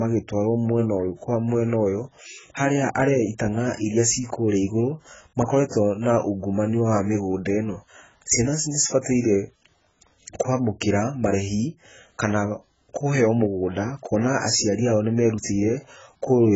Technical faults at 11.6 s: AAC compression

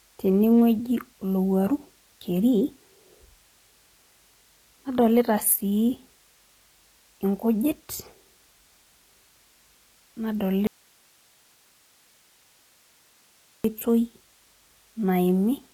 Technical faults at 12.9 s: HE-AAC compression; audio dropout to a faint residue

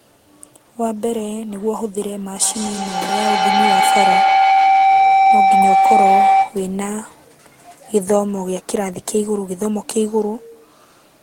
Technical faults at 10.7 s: none

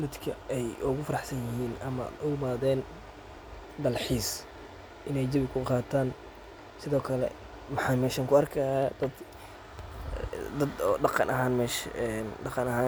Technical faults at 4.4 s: none

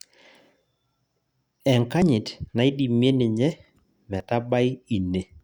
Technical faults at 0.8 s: none

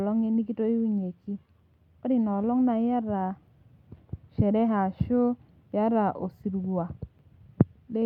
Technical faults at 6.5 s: none

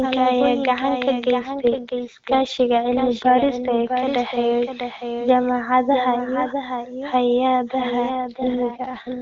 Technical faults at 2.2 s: doubled audio track; AMR rate drop

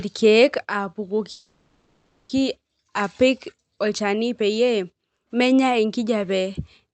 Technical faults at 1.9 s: call audio freeze

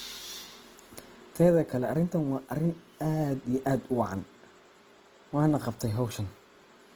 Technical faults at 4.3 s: Opus compression

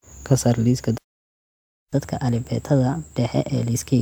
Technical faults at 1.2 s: playback stall

